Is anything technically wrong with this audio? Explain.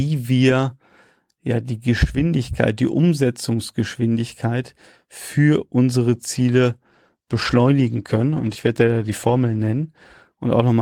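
Yes. From 6.16 s, just after "für unsere", and continuing to the end, there is a call bitrate drop. The encoder's rate falls from 40 kbps to 16 kbps and stays at its lowest for 3.4 s. With so few bits, the codec quantises more coarsely and trims the high band, so the sound turns rough, watery and duller. Unlike packet loss, the sound stays continuous, with no gaps, repeats or robotic fill-ins.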